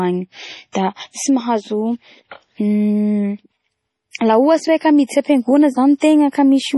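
Throughout the speech, nothing is present above 11.4 kHz, and weak spectral detail flickers in and out, giving a watery, swirling texture with chirpy sibilants. This is likely heavy MP3 compression, with a damage level that points to a bitrate around 32 kbps.

At 0.72 to 0.75 s and again at 5.98 to 6.02 s, pre-echo appears: a short hiss leads sharp onsets by 29 ms and 40 ms respectively. Quantisation noise spread across the transform block smears ahead of each attack, softening it.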